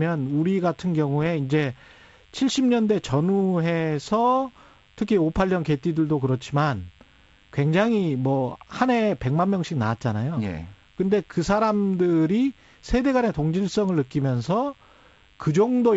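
Throughout the speech runs a DECT cordless phone buzz: radio bursts every 10 ms, rectified into a thin 100 Hz buzz about 30 dB down, drawn as evenly spaced harmonic lines across the spectrogram. From 1.20 to 1.27 s, bit errors on an ADPCM link throw off the decoder's step size and predictor, giving pops and a rough burst that shows as jagged waveform spikes and brief broadband smears. The sound fits a few corrupted frames at a low error rate, carried over G.722 wideband coding that points to its 64 kbit/s mode.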